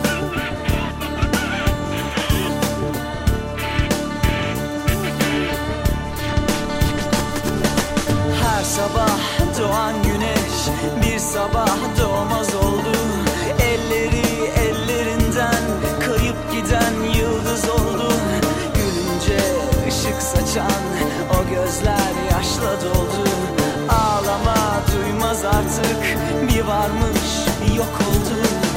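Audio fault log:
No technical faults can be heard anywhere in the signal.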